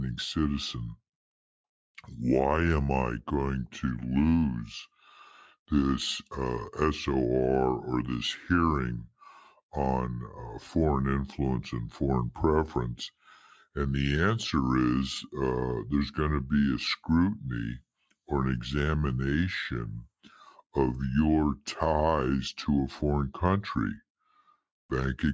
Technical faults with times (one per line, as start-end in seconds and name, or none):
0.00-25.34 wrong sample rate